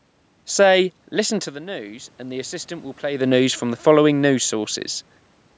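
Automatic gain rising runs from 1.15 to 3.9 s. After the input level drops by about 12 dB, the gain control slowly raises its gain by about 5 dB, so the speech and the room noise swell together over several seconds instead of recovering at once.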